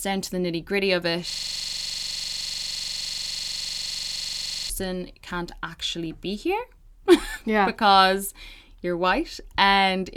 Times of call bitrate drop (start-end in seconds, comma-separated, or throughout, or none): none